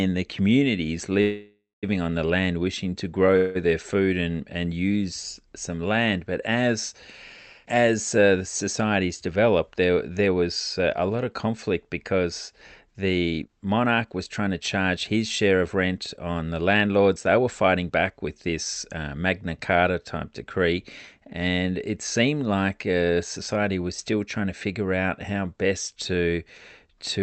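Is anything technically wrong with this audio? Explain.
Yes. Speech comes through a call path; the codec's coding noise and the high-frequency cutoff at about 8 kHz, which points to a 48 kbps Opus setting, are audible, but two kinds of fault stand out.

Call audio freezes occur at 1.21–1.85 s, after "the communities" and before "on the land wishing", and at 3.37–3.57 s, after "the land wishing to". Delayed packets likely let the jitter buffer run dry, so the receiver stretched the last sound into a fading buzz or hiss, reaching 180 ms of silence in the first, before resuming intact. A spectrogram shows smeared, repeated bands decaying into a gap.

Jitter buffer speed-up runs at 9.28–10.87 s, after "as uh the societies" and before "a lot of conflict", at about 110% speed, then at 13.38–19.04 s at about 111%. Surplus buffered audio was trimmed by cutting pitch-period pieces repeatedly, so speech sounds hurried at unchanged pitch. 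The waveform shows compressed syllables with no pitch shift on the spectrogram.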